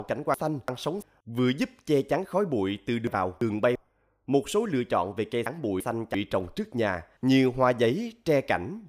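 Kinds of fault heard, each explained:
Chunks out of order: three jumbled moments in the speech, each where a 341 ms chunk played one slot late, swapping with its neighbour.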